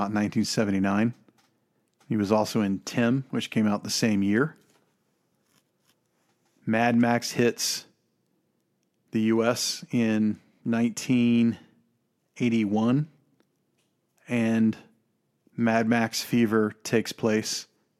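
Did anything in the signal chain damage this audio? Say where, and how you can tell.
No, nothing in the signal chain has damaged this speech recording. There is no stage to point to, because no event anywhere in the audio shows the mark of a fault being introduced.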